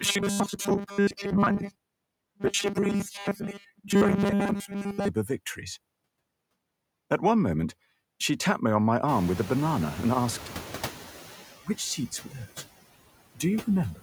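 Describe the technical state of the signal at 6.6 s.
At 6.6 s you're hearing noise suppressor artifacts, which run through the whole clip. The suppressor pulls down bands it reads as steady noise, frame by frame, by about 19 dB, so the background drops away between words and comes back up underneath the speech.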